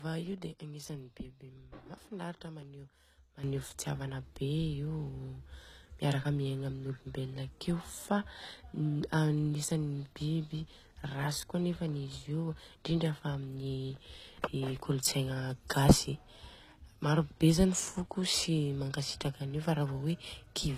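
Speech that carries the artefacts of heavy compression throughout, with nothing above 14.9 kHz, suggesting low-bitrate audio saved at a high bitrate: a roughly 20 kbit/s encoding, likely HE-AAC, later re-saved as high-rate MP3. At 3.44 s the level leaps by about 12 dB, voice and background together, and stays there to the end, likely a sudden gain jump applied without any ramp.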